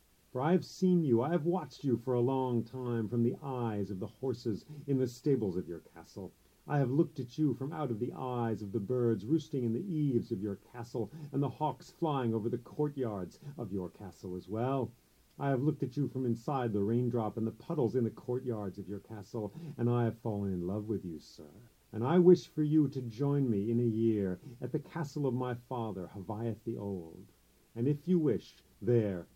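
No technical faults are audible.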